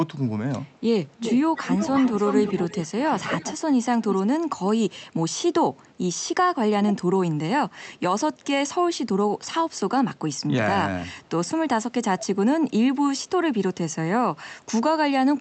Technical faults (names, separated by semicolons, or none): echo leak; speech suppressed in double talk